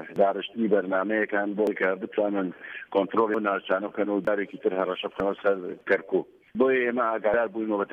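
At 1.67, 3.34, 4.27, 5.20 and 7.34 s the sound jumps abruptly, each skipping about a tenth of a second, likely a dropped buffer (overrun). The waveform shows a sudden discontinuity without silence, and the spectrogram shows thin vertical broadband lines.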